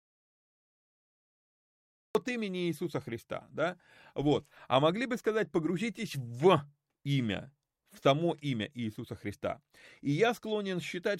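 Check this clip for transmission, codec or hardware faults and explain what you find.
One fault is present: an audio dropout to silence. The clip opens in silence, already under way, until 2.15 s, where the speech cuts in mid-flow. The input signal was likely lost while silence kept being written. There is no room tone in the gap.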